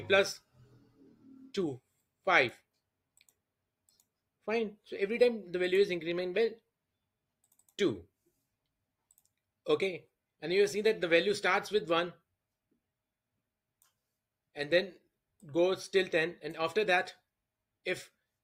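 Nothing stood out on listening to this recording.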